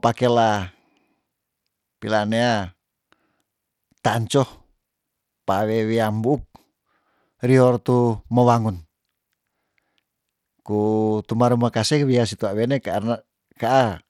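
All the way through, the speech has the plainly audible grit of Bluetooth SBC compression, likely from a starved bit pool near 96 kbps. The top sub-bands get too few bits, so the treble flickers, and coarse quantising leaves rough noise and aliasing under the voice.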